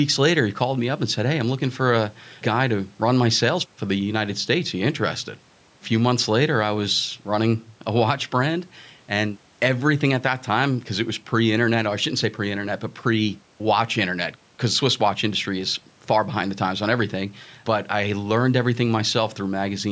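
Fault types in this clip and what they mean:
No faults can be heard anywhere in this speech.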